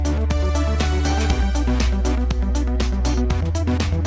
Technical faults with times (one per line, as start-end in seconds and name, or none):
none